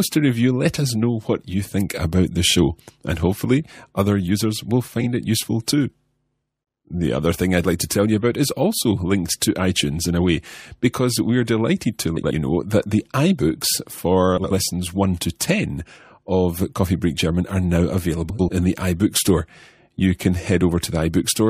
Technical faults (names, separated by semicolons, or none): frames out of order